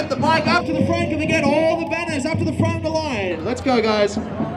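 From 0.61 to 3.31 s, one channel runs a fraction of a millisecond behind the other, around 0.4 ms, and the two are summed to mono. This channel delay produces comb filtering, with the first notch around 1.5 kHz and further notches evenly spaced above it, leaving the sound hollow and phasey.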